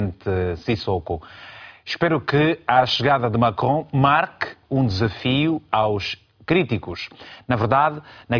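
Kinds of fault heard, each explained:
No technical fault can be heard anywhere in this speech recording. There is nothing to list against any kind of fault.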